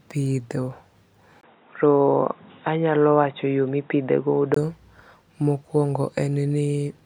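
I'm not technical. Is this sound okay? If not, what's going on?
No. From 1.41 to 4.56 s the speech turns dull and boxy, with nothing above 3.8 kHz and faint new background noise, then clears again. A tiny gap comes at the switch. This is likely an input switched to a poorer device partway through.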